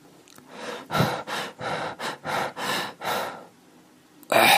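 No technical faults can be heard anywhere in this recording of sounds. There is no moment in it that needs marking.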